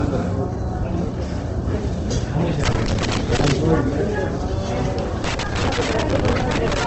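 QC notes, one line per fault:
throughout: low-bitrate audio saved at a high bitrate. The file plays as a high-rate MP3, yet nothing exists above 8.2 kHz and the coarse smearing of a far lower-rate encode remains, likely an Opus pass near 16 kbit/s re-encoded at about 256 kbit/s, which cannot restore what was discarded.
2.64–3.52 s and 5.24–6.87 s: loose connector crackle. Irregular bursts of crackle and scratching, the second running to the end of the clip, as a worn or dirty contact rapidly breaks and remakes the signal path, chopping the audio.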